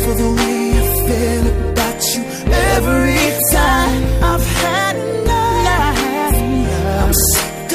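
Nothing stood out as a technical problem on listening to this audio.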